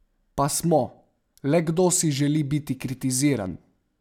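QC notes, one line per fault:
No faults heard anywhere in the speech.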